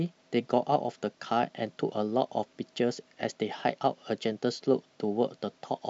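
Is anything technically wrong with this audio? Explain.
No, nothing is technically wrong with this audio.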